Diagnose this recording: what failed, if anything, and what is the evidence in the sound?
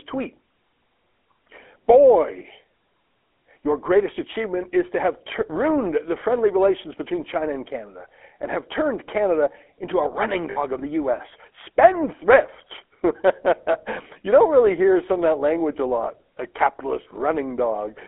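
Codec stage: GSM full-rate coding throughout leaves a buzzy, gravelly voice. On a spectrogram, energy stops near 3.4 kHz and below 250 Hz, consistent with 13 kbps full rate.

Network stage: lost GSM frames at 10.50–10.57 s and 13.72–13.75 s. The decoder repeats the last good frame, giving a brief metallic ring that shows as smeared, repeated bands.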